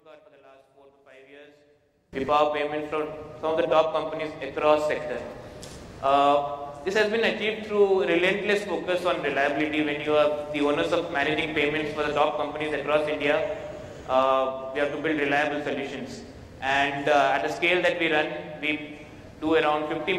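From the start to 2.13 s the sound is faint, sitting about 28 dB below where it should be. Only a weak remnant survives, as though the centre of the mix has been scooped out. The likely cause is one channel inverted: one side of the stereo pair has flipped polarity, so material common to both channels cancels when they are combined, leaving just their small differences audible.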